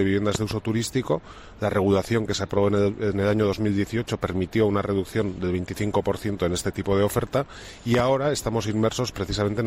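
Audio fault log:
0.35–0.54 s and 7.95–8.02 s, loud pop: each is a pair of sharp pops roughly 15 dB above the sound, which continues underneath, likely a voltage step from a plug, switch or static. The waveform shows tall narrow spikes; the spectrogram shows thin broadband vertical lines.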